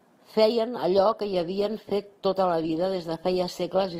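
Adaptive stream at a lower bitrate from 0.97 s to the end of this speech clip: the sound abruptly picks up more codec artefacts, with no gap, as the player switches down to a lower-quality version, which fits Opus dropping from 64 to 16 kbit/s.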